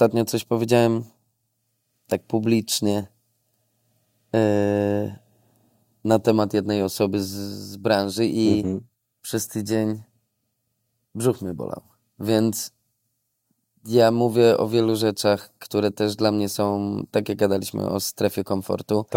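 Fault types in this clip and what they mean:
Nothing stood out on listening to this speech recording.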